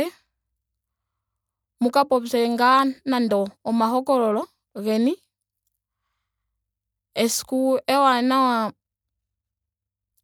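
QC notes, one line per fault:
Nothing stood out on listening to the speech, so there is nothing to log.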